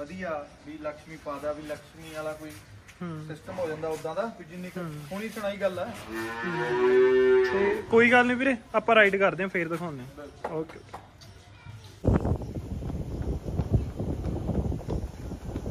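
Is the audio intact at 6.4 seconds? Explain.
Yes, the audio at 6.4 seconds is intact, with no audible fault at that moment.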